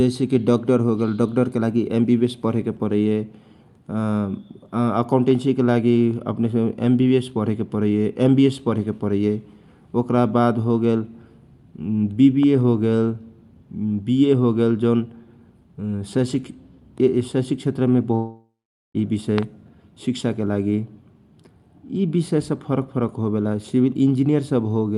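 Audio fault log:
18.15–18.96 s, long network dropout: packets likely stopped arriving, so the last sound fades as a buzz or hiss into about 0.43 s of silence, and 0.8 s of speech never returns.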